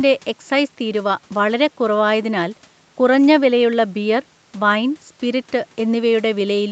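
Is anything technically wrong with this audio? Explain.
No, nothing is technically wrong.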